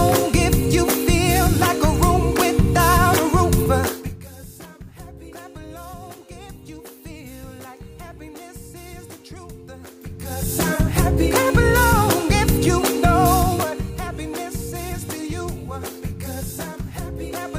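At 3.66 s there's a small jump forward in the sound, the mark of a dropped buffer (overrun). The likely cause is the recording side not collecting its samples before the hardware wrote over them, so roughly 30 ms of audio vanished and the two sides were butted straight together. No gap of silence, just that slight skip.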